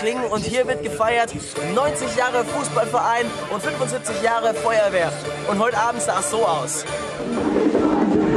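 Nothing in this clip stands out as a technical fault; the audio just runs along without any glitch, dropout or distortion to point to.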